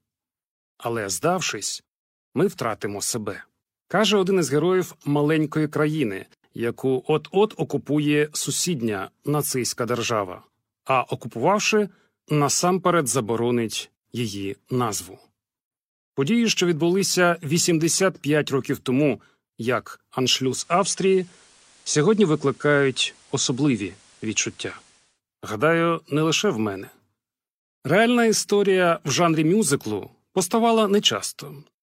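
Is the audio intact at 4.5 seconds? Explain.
Yes, the speech at 4.5 seconds is intact, with no dropout, click, distortion or other fault there.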